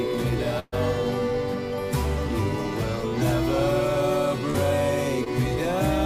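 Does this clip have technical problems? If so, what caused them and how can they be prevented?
Yes. A burst of packet loss at 0.59 to 0.74 s drops about 120 ms. The receiver extends the last sound for 128 ms, fading it, then 20 ms of silence precedes the resumed audio. Short concealed packet loss at 4.50 to 4.56 s (40 ms) and 5.24 to 5.28 s (20 ms) gets patched by continuing the preceding sound, leaving brief smears. Prevent both with a more stable network path, forward error correction and a larger jitter buffer.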